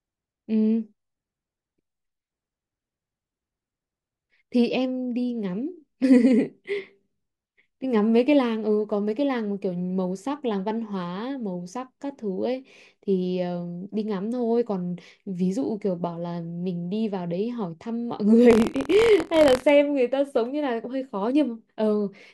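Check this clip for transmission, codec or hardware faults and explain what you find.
One fault is present, buffer tearing, from 18.48 to 19.71 s. Writer and reader pointers in the playback ring buffer have drifted together, so each period carries a small slice of speech about 50 ms stale, hard-spliced in. This produces a rattling buzz at 43.1 Hz, which fits a 1024-sample buffer.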